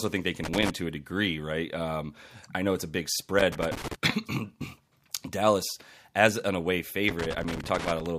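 Loose connector crackle breaks into the speech three times. It runs from 0.44 to 0.70 s, between "think they" and "to a degree right", then from 3.39 to 3.95 s after "know it's a big", and from 7.08 to 8.06 s after "as an away". A worn contact makes and breaks, chopping the signal into irregular scratchy bursts. Unlike evenly spaced digital clicks or dropouts, the crackle is ragged and clustered, as if from moving a cable.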